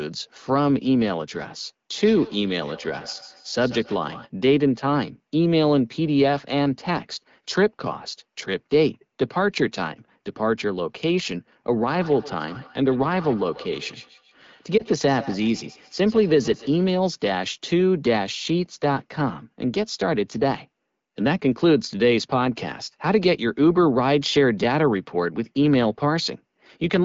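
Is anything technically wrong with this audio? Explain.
Yes, there are two faults. From 2.03 to 4.31 s, and again from 11.9 to 16.97 s, there is feedback echo between two devices. Two devices on the same call share a room, and one device's microphone picks up what the other plays, which its own echo canceller cannot remove. The sound comes back at a steady interval of about 150 ms, at about −19 dB and then about −17 dB below the speech. The repeats are discrete and get thinner and more ringing each time, which is what separates this from ordinary room reverberation, where the decay is smooth.

At 14.78 to 14.84 s, inside the second echo span, a lost AMR speech frame causes a brief dip or warble. The pattern fits a single 20 ms frame that failed its radio checksum. The decoder filled the gap by reusing the last good frame's settings at lower gain. It is not a hard dropout, because the sound smears instead of cutting to silence, and the voice is momentarily weak or rough as it recovers.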